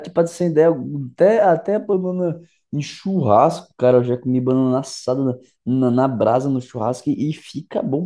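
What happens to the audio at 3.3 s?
At 3.3 s the speech is slightly slow and low, dropped about 1.5 semitones and running at 0.919 times its proper speed, from 1.93 s to 3.57 s. This is a wrong sample rate fault, with no conversion, consistent with 24 kHz audio played at 22 kHz.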